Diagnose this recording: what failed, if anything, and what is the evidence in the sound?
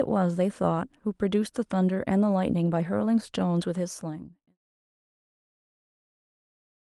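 Nothing failed; no faults found.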